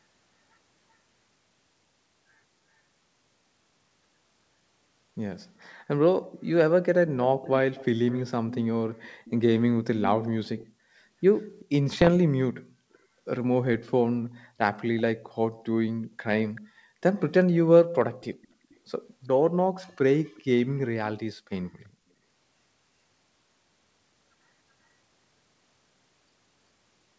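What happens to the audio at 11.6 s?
An echo leak runs from 11.34 to 11.65 s: a faint, delayed copy of the speech returns about 384 ms late, far quieter than the voice. This likely comes from a far-end loudspeaker whose echo canceller let some of its microphone pickup back into the call.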